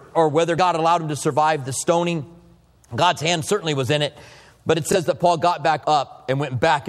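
Bluetooth stutter at 4.93 s: one lost packet, so the receiver replays about 23 ms of buffered sound, a brief blip before playback jumps ahead.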